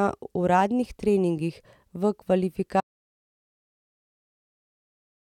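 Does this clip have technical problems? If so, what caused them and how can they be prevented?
Yes. At 2.81 s the speech cuts off mid-flow and the audio drops out to silence for the rest of the clip, with no room tone or noise floor left. This is most likely lost input, such as a disconnected device, failed link or accidental mute, while the recorder kept writing zeros. On a waveform the trace falls abruptly to a flat line; a spectrogram shows a clean black void across all frequencies. Secure connections, disable stray mutes and monitor input levels live to prevent it.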